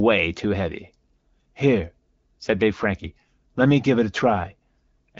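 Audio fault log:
No faults are present in the speech, which passes through an AMR wideband (HD Voice) codec path at 12.65 kbit/s, a rate at which its coding of the band up to about 7 kHz stays clear.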